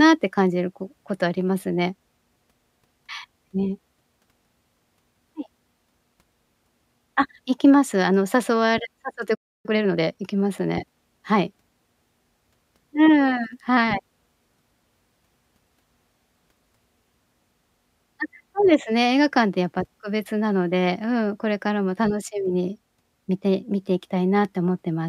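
At 9.34 s the speech cuts out in a playback stall, silent until 9.66 s, about 0.3 s. The player likely ran out of buffered data. From 9.66 to 10.24 s comes time-compressed catch-up. Speech runs 1.5 times fast at normal pitch, as spliced, cross-faded fragments shorten the backlog.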